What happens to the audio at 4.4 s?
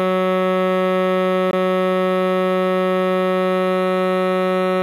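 At 4.4 s the music carries the same low bit depth with noise shaping heard throughout the clip. Very coarse quantisation, consistent with about 9 bits, has its rounding error pushed upward, giving a thin hiss roughly 35 dB below the music that brightens sharply toward the top, unlike flat broadband noise.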